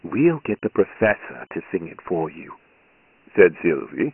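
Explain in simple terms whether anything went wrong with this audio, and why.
The speech sounds thin, muffled and gritty the whole way through. That's Dialogic VOX ADPCM, a coarse phone-system format that discards everything above 3 kHz.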